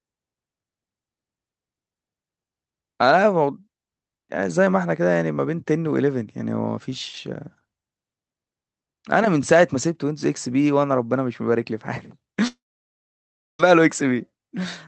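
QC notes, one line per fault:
12.47 to 13.61 s, long network dropout: the sound smears into a short buzzy tail for about a tenth of a second, fades, then there's roughly a second of dead silence before the audio picks up again with about 1.1 s simply gone. That's most likely a stretch of lost packets the receiver's concealment tried to paper over and then gave up on. You can also hear the call codec's usual coding grit and a top end that stops around 8 kHz, which fits Opus at about 32 kbps.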